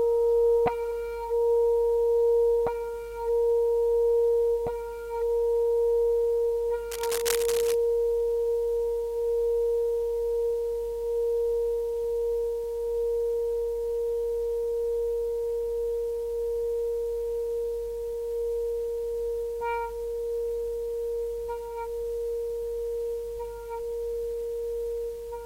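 From 6.91 to 7.74 s a burst of cable scratch noise sits over the sound: dense, uneven crackling and rustling at around 10 dB below the signal. It likely comes from a worn cable or connector being moved, its contact resistance fluctuating rapidly.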